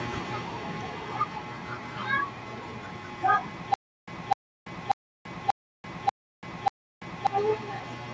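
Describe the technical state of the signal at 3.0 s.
At 3.0 s the speech is intact, with no fault present; the only processing heard there is the normal call microphone chain, which limits the sound to nothing above about 8 kHz and trims the lowest bass.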